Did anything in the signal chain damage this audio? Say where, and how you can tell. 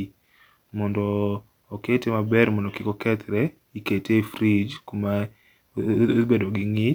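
No, nothing along the chain seems to have harmed this speech recording, and I can't find a single moment where any stage gives itself away.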